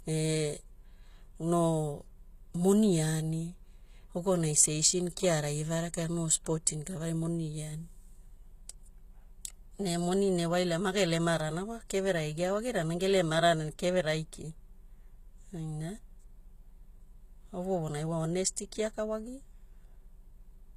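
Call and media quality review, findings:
Speech treble gritty and lispy throughout; s sounds metallic. Plainly audible codec damage. Nothing above 14.9 kHz. Likely HE-AAC compression, consistent with a low bitrate near 20 kbps. Upper band rebuilt by spectral band replication; harmonics misaligned above crossover.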